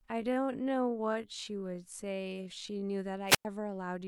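From 0.0 to 2.84 s the speech runs slowly, at about 0.56 times its normal pace, while the pitch stays where it belongs. This is a time-stretched section. Software likely lengthened this passage to fill a set duration. It kept the pitch by repeating short slices of the sound. Those repeats give the speech a dragging quality. The pace then jumps back to normal at 2.84 s.

At 3.27 s a wireless microphone squelch dropout begins and lasts until 3.45 s. The radio signal from the microphone fades. Hiss rises briefly. Then the receiver's squelch cuts the output, leaving a hole of near silence about 102 ms long. The speech then returns.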